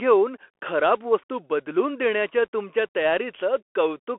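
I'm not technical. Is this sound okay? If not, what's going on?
No, not quite. The whole clip sounds like speech squeezed through a Bluetooth CVSD headset codec, the basic mode headsets use for calls. It only keeps roughly 300 Hz to 3.4 kHz, and nothing above about 3.8 kHz gets through, so it sounds thin and boxy like a phone line. The codec tracks the sound with tiny up-or-down steps that can't keep up with sharp sounds, so s sounds come out scratchy and a grainy hiss sits underneath.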